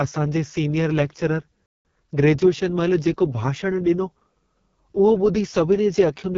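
A speech recording carried through the AMR wideband (HD Voice) codec at one of its lowest modes, with heavy coding damage throughout. The voice has a rough, raspy, buzzy texture, the kind the codec produces when its pulse-driven vocal tract model is starved of bits, which fits the 6.6 kbit/s mode. Nothing is present above about 7 kHz, and the top band sounds like hiss shaped onto the speech rather than real detail. Just after "असां जे सीनियर लेकचरर", the audio cuts to silence from 1.66 s to 1.85 s. This playback stall is a dead gap of about 0.19 s in the middle of the flow. The likely cause is the player running short of buffered data or having its output thread held up, so nothing reached the output until it recovered. Speech then resumes where it stopped. From 1.85 s to 2.21 s, leading up to "महिल जेको", a time-compressed catch-up follows. The player works off the backlog left by the stall by cutting out small slices and cross-fading across the joins. 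That section runs at about 1.5 times normal speed. Pitch stays normal, but the speech sounds hurried.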